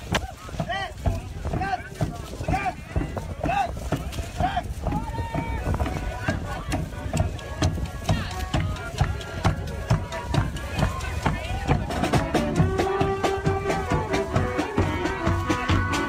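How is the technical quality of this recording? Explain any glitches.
No glitches or technical faults can be heard anywhere here.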